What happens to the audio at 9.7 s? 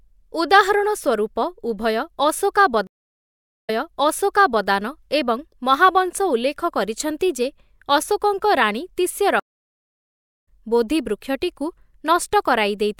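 A stream reconnect runs from 9.40 to 10.47 s. The connection dropped, so playback stopped; the player then reconnected and started a new decoder partway through the stream. After "କରିଛନ୍ତି ଯେ ଅଶୋକଙ୍କ ରାଣୀ" the speech cuts to about 1.07 s of silence. It resumes at "ବୋଧି ବୃକ୍ଷଟିକୁ", roughly 0.7 s further on than where it stopped, so a short stretch of the speech is skipped rather than delayed.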